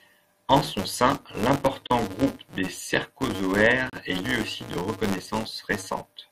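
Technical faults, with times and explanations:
Throughout: filter restarted on every block. A buzz at 188 Hz sits under the speech, which fits a 256-sample block. The filter loses its state at each block boundary and starts again from silence. That restart leaves a small transient at the start of every block. The transients repeat at the block rate and merge into a steady buzz. It grows louder and softer with the speech, because each transient scales with the signal level.
1.87–1.90 s and 3.90–3.93 s: gap between stream segments. The speech cuts out abruptly twice, for about 31 ms and then about 32 ms. The silences have hard edges and fall 2 s apart, matching the segment length. The time stamps of neighbouring segments do not line up, so the player fills the space with silence. No audio goes missing. The gap adds time, and the speech resumes just after the hole.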